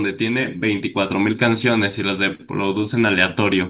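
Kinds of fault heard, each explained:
Clock drift between sender and receiver: The sending side's clock is running slow, somewhere around 3 percent behind the receiver, so the jitter buffer keeps draining and the receiver has to pad it out with repeated bits of audio. You hear small timing stumbles dotted irregularly through the whole clip, over the narrow, band-limited sound of the call codec, which has nothing above 4 kHz and fits G.711 mu-law.
Short stall from a late packet: At about 2.35 s a packet shows up late, the buffer runs dry, and the receiver holds the last bit of sound for about 40 ms until it arrives, across a span ending near 2.41 s. Nothing actually goes missing. Playback just picks up where it stopped, but that moment sounds briefly frozen and smeared, and everything after it lands about 40 ms later than before.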